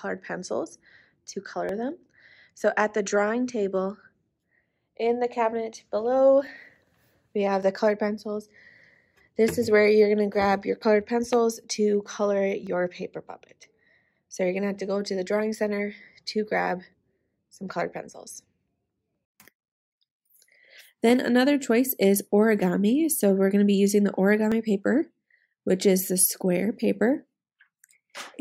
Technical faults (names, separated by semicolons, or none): dropped samples